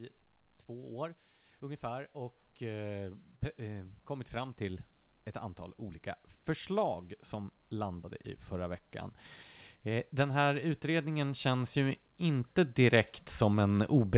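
From 0.45 s to 8.93 s, automatic gain rising lifts the level by about 12 dB as the gain control chases a quiet input; voice and background swell together, and the waveform envelope widens steadily. It climbs again from 9.84 s to the end, above the band-limited call audio, which shows nothing above 4 kHz.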